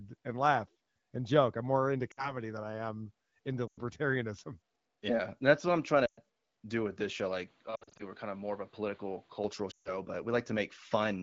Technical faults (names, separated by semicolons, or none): lost AMR speech frames; input switched to a poorer device